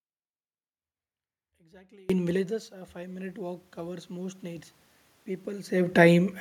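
Speech recording with two faults. An audio dropout to a faint residue is already under way at the start and lasts until 2.1 s, leaving only a trace about 30 dB below normal, likely a signal loss with the downstream path still live. From 2.32 to 4.72 s, automatic gain rising is audible: after the input falls by 17 dB, the gain control gradually adds 6 dB, swelling voice and room noise together.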